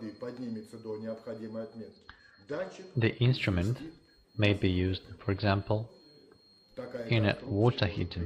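Twice, at 1.97 to 2.95 s and from 7.30 s to the end, a Bluetooth SBC bit pool drop starves the encoder, which fits a fall from bit pool 31 to 11, near 83 kbps. The top sub-bands lose their bits, so the treble dulls and gritty quantisation noise rises.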